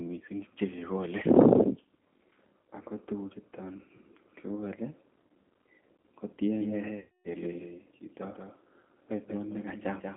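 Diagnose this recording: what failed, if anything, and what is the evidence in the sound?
Throughout, the speech sounds rough, slightly synthetic and plainly degraded, with nothing above the telephone band of roughly 200 Hz to 3.4 kHz. This is codec-stage damage from the G.729 codec, an 8 kbit/s coder that rebuilds each 10 ms frame from a vocal-tract filter, a pitch predictor and a handful of pulses. The band-limiting and the coarse, buzzy texture both fit that model-based reconstruction rather than a faithful copy of the waveform.

From 6.60 s to the end, a second full-band copy of the speech trails the original by roughly a fifth of a second, about 5 dB quieter. It has no room colour or decay, and it starts abruptly. This is a doubled audio track, likely from the same signal being captured again by a slower path and mixed back in. Because the echo is dry and fixed in time, it points to a routing or capture fault rather than acoustic reflection.

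From 6.99 s to 7.29 s, the speech is stretched into a buzzy tone or coloured noise that fades, and it stays weak for a little while after. This is VoIP packet loss concealed by the speech codec. It happened at the network stage, with about 260 ms missing, which fits thirteen lost 20 ms packets. The decoder extrapolated from its last pitch and filter state while lowering the gain, and because each frame builds on the previous one, it needed time to recover once packets returned.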